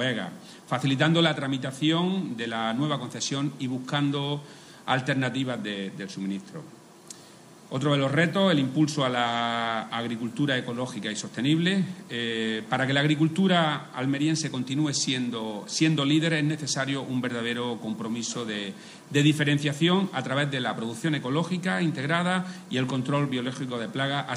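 Nothing goes wrong anywhere in the audio; there are no glitches, dropouts or other technical faults to point out at any moment.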